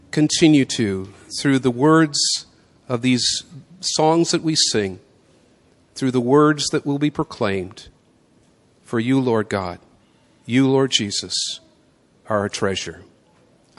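MP3 compression damage runs through the whole speech clip, from start to finish, and is plainly audible. The likely cause is an MP3 encode at a low bitrate, with a sound that fits roughly 48 kbps. Starved of bits, the encoder has dropped weak frequency lines that flicker on and off between frames. The result is a watery, swirling texture, with metallic chirping on s sounds and smeared consonant attacks.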